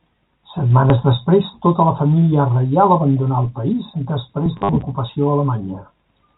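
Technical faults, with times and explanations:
4.57–4.69 s, packet loss with last packet repeated: about 90 ms of audio went missing in scattered pieces across 120 ms, the longest unbroken run 50 ms, and each gap was filled by replaying the preceding chunk. The replays clash with the pitch, and the repeats buzz at about 100 Hz, which fits 10 ms packets. Unlike a plain dropout, there is no silence, only a robotic stutter, set against G.711 telephone band-limiting.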